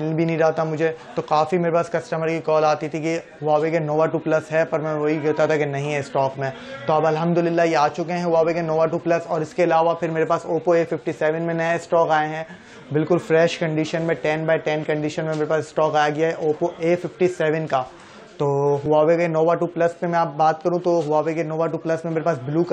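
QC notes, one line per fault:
18.86 s, dropped buffer (overrun): the sound jumps abruptly forward instead of flowing on, with no gap of silence at the join. This is likely an overrun, where incoming samples were not read out before the hardware wrote over them. Roughly 5 ms of audio is lost, and the material on either side is spliced straight together. The sudden discontinuity in the waveform produces the slight skip.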